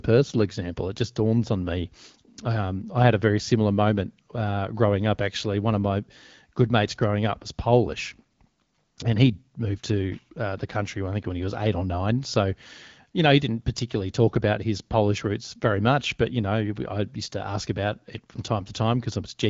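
Speech coded through AMR-WB (HD Voice) at 12.65 kbit/s, a rate that leaves only light coding texture, with no technical faults heard.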